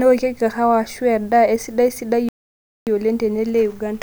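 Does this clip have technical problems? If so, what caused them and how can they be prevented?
Yes. The speech cuts out abruptly at 2.29 s and stays silent until 2.87 s, a gap of 0.58 s, which is a playback stall. The player likely ran short of buffered data, or its audio thread was held up, so nothing reached the output until it recovered. On a waveform this shows as a flat line between those times; a spectrogram shows an empty vertical band with sharp edges. Larger playback buffers and a non-blocking audio thread would prevent it.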